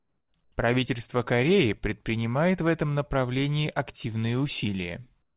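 From 0.00 to 0.34 s, 0.44 to 0.52 s and 5.22 to 5.36 s, the background turns into a smooth, featureless hiss about 5 to 8 dB quieter: comfort noise in place of the background, likely from the sender pausing transmission during silence, with the band-limited sound stopping near 4 kHz.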